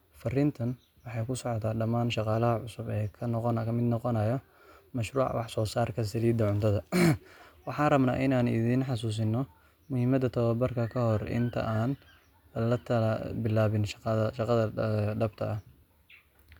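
Nothing goes wrong in this bit of speech: there are no technical faults to point to anywhere along the way.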